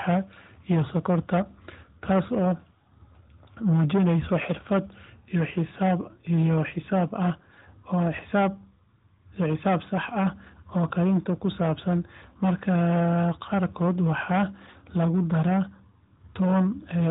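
Speech passed through an AMR narrowband mobile path, with its 4 kHz band limit and light codec coloring, suffers hard clipping throughout: driven about 12 dB past full scale, roughly 7% of samples are sheared flat, adding harsh crackling fuzz on every loud syllable.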